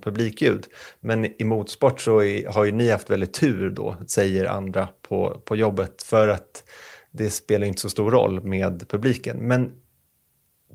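Nothing here needs flagging, since the speech runs its whole course without a single technical fault to point at.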